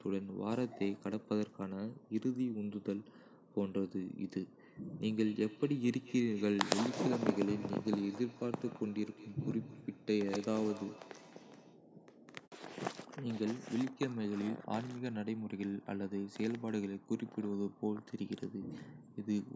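Speech with a feedback echo between two devices from 5.24 to 11.84 s. Each word returns about every fifth of a second, at most about 16 dB below the speech.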